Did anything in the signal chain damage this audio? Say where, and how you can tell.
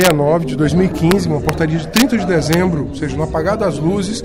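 Yes: integer overflow, at 0.01 to 0.11 s, 1.11 s, 1.49 s, 1.96 to 2.02 s and 2.53 s. Each is a violent crack, far harsher than clipping, because the peaks were pushed about 1 to 2 dB past full scale in a fixed-point gain or sample-format conversion stage. Instead of being limited, those samples wrapped to the opposite sign, jumping across the whole range.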